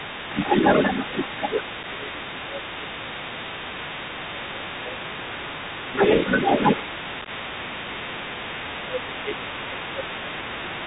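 The whole thing runs through a Bluetooth CVSD headset codec, and you can plainly hear it. That 64 kHz one-bit stream only tracks up-or-down steps with an adapting step size, so nothing gets above 4 kHz. There's a grainy hiss sitting under the speech, and the sharper, louder high sounds come out rough and scratchy where the step size can't keep up.

From start to finish there's a second voice in there too, roughly as loud as the main talker. That's most likely the other side's voice leaking through: their audio playing on the loudspeaker and getting back into the mic because the echo canceller didn't strip it out.

That same tangle shows up as speech suppressed in double talk, likely the canceller ducking everything when both sides talk at once. The talker dips by about 5 dB briefly at 1.11 to 1.29 s and again at 5.92 to 5.98 s. Deeper drops, around 10 dB, come at 1.63 to 3.49 s, 4.16 to 5.0 s, 6.77 to 8.14 s, and 8.88 to 10.37 s. 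In those stretches the voice sags in patches.

Then there's unconcealed Bluetooth headset packet loss. At 1.83 s a tiny gap of about 7.5 ms punches a hard-edged hole, which fits a single dropped headset packet. Around 7.22 to 7.29 s it's worse: about 30 ms missing, scattered over 60 ms with the longest hole about 15 ms, which sounds like roughly four packets gone. Nothing fills the gaps, so you get a short burst of choppy breakup, and the voice comes back a touch quieter for a moment.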